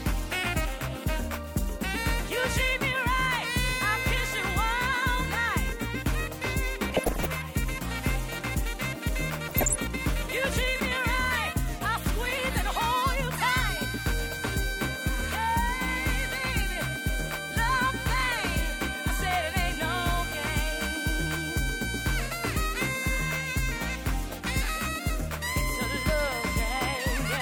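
DAB burbling appears from 6.90 to 7.26 s and again from 9.44 to 9.82 s. Bit errors near 1 and 0.7 percent slip past error correction, corrupting MP2 sub-bands with short blips of noise and jumps in level. A single loud pop, about 10 dB above the signal, hits from 26.09 to 26.11 s, likely a voltage step from a plug, switch or static discharge.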